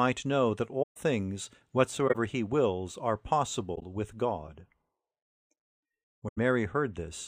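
Four stretches of concealed damage break the speech: from 0.82 to 0.97 s right after "know that", 2.07 to 2.15 s just before "he wills are", 3.75 to 3.83 s just after "he wills are", and 6.28 to 6.38 s. These are corrupt frames concealed. The decoder detected damaged AAC data and covered each stretch itself. The lengths fit runs of roughly three to six frames.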